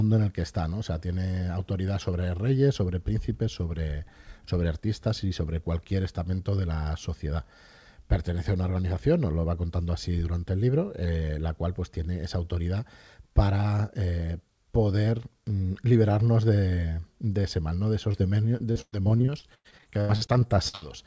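Short concealed packet loss at 18.12–18.16 s: roughly 20 ms of speech arrived too late, so the decoder extended the preceding sound, leaving a brief smear. Repeated packet loss (robotic sound) from 18.58 to 20.84 s: holes recur throughout, the longest about 110 ms, each patched by continuation, making choppy speech with about a third concealed. The call path caps everything at 8 kHz, which fits G.722.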